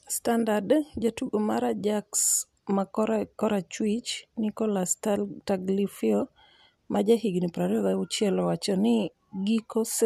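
No technical faults can be heard anywhere in the speech recording, with the signal remaining steady and intact throughout.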